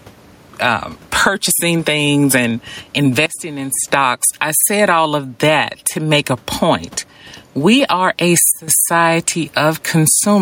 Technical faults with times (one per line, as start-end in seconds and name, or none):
0.00-10.41 gain pumping
3.26-3.88 sudden gain jump
8.52-8.68 sudden gain jump